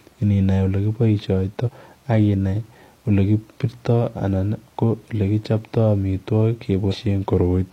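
At 1.63 s and again at 6.88 s, the speech jumps forward. These are compressed frames skipped. Around 150 ms of audio is missing each time, which fits three frames of 46.4 ms lost or rejected by the decoder. At each join the audio jumps abruptly ahead.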